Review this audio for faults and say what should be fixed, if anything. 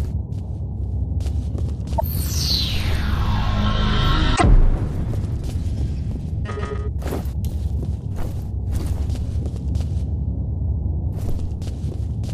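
Damaged data in a compressed stream appears twice, at 1.95 to 2.01 s and at 4.33 to 4.42 s, each a brief glitch lasting roughly 65 and 100 ms. At those points, corrupted bytes in the encoded stream leave the decoder unable to read the affected frames. It loses sync, outputs garbage or nothing while it scans for the next valid frame header, and then resumes. To prevent this, verify transfers with checksums and use error-protected frames or a reliable transport, re-fetching any segment that fails its check.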